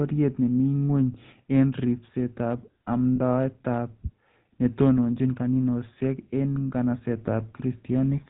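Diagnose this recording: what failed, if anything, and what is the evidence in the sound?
The codec stage is the culprit here. The speech has that gravelly, buzzy texture of the GSM full-rate codec, and the damage is plainly audible all the way through. Nothing comes through above 4 kHz, which fits the 13 kbps full-rate coder. It rebuilds the voice from a vocal-tract model driven by a sparse, regularly spaced pulse excitation, and that coarse excitation is where the rough buzz comes from.

There's also a short glitch from lost GSM frames, network or transport side, right after "en ribseetab", from about 3.16 to 3.20 s. For a moment the sound holds on a rough, metallic ring instead of moving on. The decoder had no good data, so it repeated the last good frame's settings to bridge the gap. The loss is brief, which fits a single 20 ms frame.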